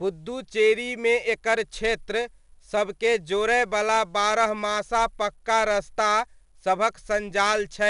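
From start to finish, the speech carries a gritty hiss that rises and falls with its loudness, clinging to every strong syllable, with roughness on sharp onsets, and nothing is heard above about 10.6 kHz. This is 4-bit ADPCM compression: each sample is coded as a coarse four-bit step from a predicted value, so the error follows the signal level, and attacks outrun the adapting step size. The plainly audible damage fits a stream of about 88 kbps.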